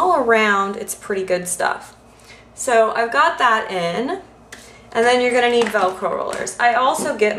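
Nothing in the audio stood out as a technical problem on listening.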